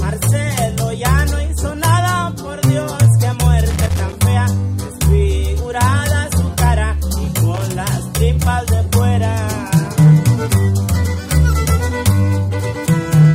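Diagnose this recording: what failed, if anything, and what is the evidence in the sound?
The failure is in the analogue wiring: loose connector crackle. Two irregular bursts of crackle and scratching interrupt the sound, the first from 3.70 to 4.13 s, lasting about 0.43 s, and the second, shorter one from 7.54 to 7.63 s. A worn or dirty contact in a plug or jack is making and breaking as it shifts. Each break chops the signal, producing the ragged, uneven texture rather than a clean dropout.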